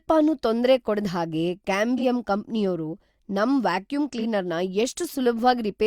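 Two AAC frames were lost in transmission in this speech clip, at 1.97 to 2.04 s and 4.13 to 4.24 s, and each time the decoder concealed the gap by rebuilding audio from the last good spectrum. Each dropout spans about 43 ms, which fits a single missing AAC frame. This AAC frame loss with concealment is heard as a brief smeared, noisy or phasey patch in the speech rather than a silent gap.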